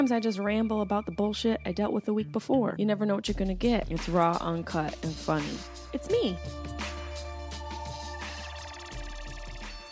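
No technical faults are audible anywhere in this clip.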